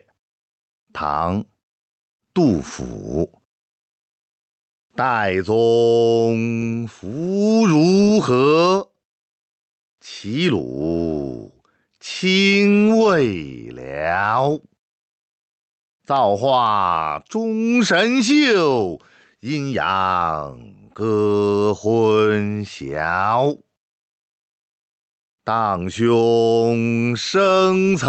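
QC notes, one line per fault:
Throughout, gain pumping: the input gain is likely set far too high, so a fast limiter or compressor clamps down on every loud sound and releases in the gaps between them. The gain swings by around 10 dB. Loud and quiet passages sit unnaturally close in level, leaving a squashed quality over the 8 kHz-limited call audio.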